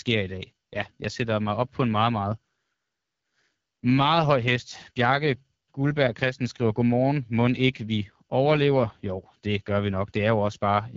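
From start to finish the speech sounds rough and raspy, with a buzzy, grainy edge on every phrase and nothing above about 7.4 kHz. This is the AMR wideband (HD Voice) codec, AMR-WB, working at a low rate. The character points to the 8.85 kbit/s mode, one of its two lowest. At that rate the pulse-driven vocal tract model is too coarse to rebuild the voice cleanly, so the damage is plainly audible throughout.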